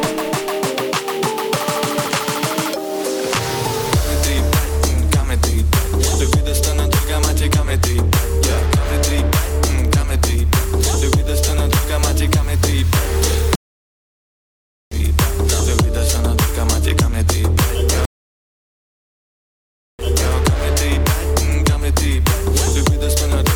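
At 13.55 s a stream reconnect drops the audio for 1.36 s; when it resumes at 14.97 s with a fresh decoder, about 1.5 s of material is skipped. A second stream reconnect at 18.05 s silences for 1.94 s, then restarts at 20.33 s 340 ms earlier, briefly repeating audio.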